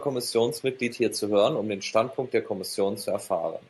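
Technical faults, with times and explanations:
No faults found; the speech carries the expected signature of a call path, with its top end stopping around 12 kHz, which fits Opus at a super-wideband setting.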